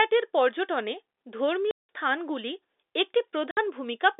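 At 1.71 s the speech drops out for 180 ms, resuming just before "স্থানগুলি একটি". At 3.51 s, right after "স্থানগুলি একটি", a shorter 60 ms hole follows. Both are packet loss filled with silence: lost packets were replaced by silence, and the gap lengths fit 30 ms packets. On a waveform each gap is a dead-flat line with abrupt ends. On a spectrogram it shows as an empty vertical strip, within the 300 Hz to 3.7 kHz telephone band of the G.711 line.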